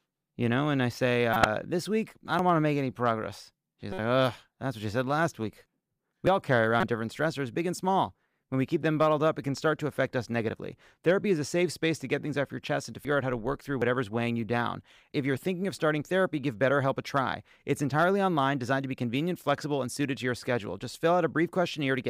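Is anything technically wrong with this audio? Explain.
Yes. Two kinds of fault run through this speech clip.

Corrupt frame decoded: damaged compressed frames reached the decoder and were played anyway, so misread gains and codes threw energy into the wrong frequencies. This happens at 1.33–1.46 s, between "know and I say" and "this week I don't", over roughly seven frames, peaking near about -10 dBFS. It happens again at 3.92–3.99 s, weaker at about -20 dBFS, and at 6.80–6.86 s, after "all carry" and before "different stressors big and", at about -15 dBFS. Each is heard as a brief squeaky, noisy burst.

Dropped buffer (overrun): the audio jumps at 2.39, 6.27 (just before "all carry"), 8.82, 13.05 and 13.82 s. Each jump skips around 20 ms of sound, and the one at 13.05 s skips around 70 ms. There is no gap of silence, so the two sides butt together. The likely cause is samples not being collected before the hardware overwrote them.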